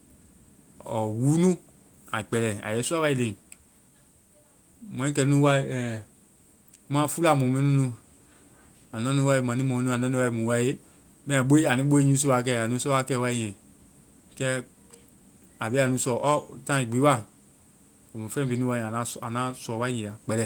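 No technical faults detected.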